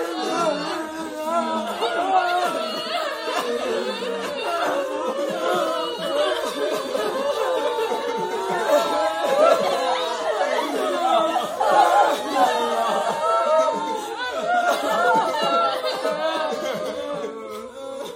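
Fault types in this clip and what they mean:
Frames out of order: two neighbouring runs of about 46 ms, each fitting two codec frames, were swapped. From 9.63 to 9.73 s the sound plays with its halves exchanged. It is heard as a brief garbled flutter. No time is lost.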